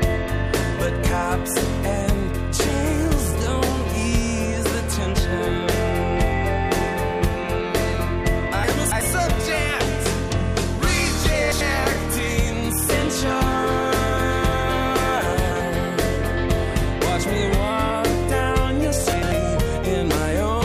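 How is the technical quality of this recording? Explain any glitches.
Four short jumbled spots mar the recording, all from chunks out of order. At 8.64–9.01 s and 11.24–11.61 s, a block of roughly 93 ms lands three blocks late; at 15.33–15.60 s it's two late, and at 19.13–19.32 s one late. Nothing goes missing, but the sound plays in the wrong sequence, with three hard joins around each spot.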